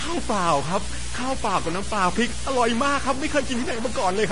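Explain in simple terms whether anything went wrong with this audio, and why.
A few things went wrong with this speech, and they run the whole way through.

First, there's video or display buzz: a screen or video cable leaked into the audio, giving a steady hum-buzz at about 60 Hz, the picture's refresh rate, with hash on top and a thin, very high whine near 15.7 kHz.

Second, the speech sounds gritty and grainy, and the roughness follows the voice and gets worst in the quiet bits. That's likely low bit depth without dither: the audio was chopped down to very few steps, consistent with about 4 bits, by simply cutting off the rest.

Third, everything above roughly 10.5 kHz is missing, and the sound has that swishy, smeared quality of a heavily squeezed file. It's likely low-bitrate audio saved at a high bitrate: a poor-quality MP3 was re-saved as a bigger MP3, which can't bring back what was lost.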